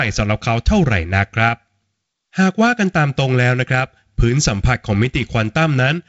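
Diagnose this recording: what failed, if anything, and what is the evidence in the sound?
Nothing failed; the recording shows no faults.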